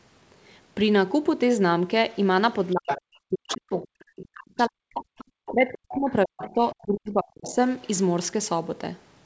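An echo canceller that likely failed to remove the loudspeaker signal lets the other side's voice leak through, first from 2.65 to 3.01 s at a strong level, about 5 dB below the talker. As both sides then talk at once, the same canceller likely treats the talker as echo, and speech is suppressed in double talk from 2.73 to 5.04 s. The main voice sinks by as much as roughly 40 dB for around two seconds of that stretch.

Around that window the residual echo returns more faintly, about 15 dB under the speech, from 3.48 to 3.82 s and again from 4.6 to 5.98 s. The second leak overlaps a new double-talk suppression from 5.5 to 7.58 s, where the talker is again pushed down by up to about 40 dB across roughly two seconds. More brief scraps of the far side come through at 6.38 to 6.5 s (about 15 dB down) and 7.47 to 7.54 s (about 20 dB down). A last faint trace at 7.86 to 7.9 s sits about 35 dB below the speech.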